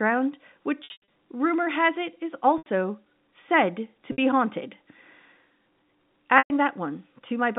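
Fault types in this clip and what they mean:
Packet loss with pitch repetition: packets were dropped, and the receiver bridged each gap by looping the last pitch period and fading it out. Four gaps, at 0.84, 2.58, 4.12 and 6.38 s, lose 60 to 200 ms, heard as a briefly held, buzzy note that fades into silence before the speech returns with a short cross-fade.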